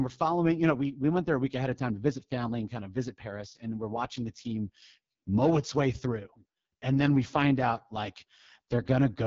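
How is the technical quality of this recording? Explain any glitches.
Quality is poor throughout. The speech sounds rough and raspy from start to finish, with a buzzy, grainy edge and nothing above about 7.2 kHz. That is the AMR wideband (HD Voice) codec at heavy compression, fitting its lowest rate near 6.6 kbit/s, where the pulse-driven vocal model lacks bits and the top band is filled with shaped noise.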